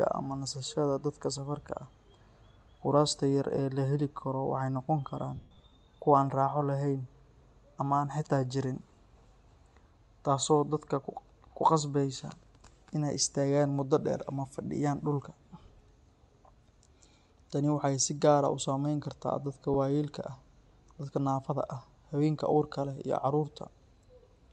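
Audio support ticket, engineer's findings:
Speech throughout has a breathy, grainy top end with noise-like sibilants; codec damage plainly audible for the full clip. Likely cause: Bluetooth LC3 compression, with the upper spectrum zeroed and noise-filled. Artefacts fit roughly 48 kbps, 10 ms frames.

5.36–5.72 s, right after "noqon karaan": noisy smearing and brief fading dropouts. Lost LE Audio frames, about 270 ms missing across 360 ms, longest gap around 100 ms. The LC3 decoder reused the last spectrum with random signs.

19.74–19.76 s: single short smear. One lost LE Audio frame, 10 ms, concealed by the same spectrum repetition.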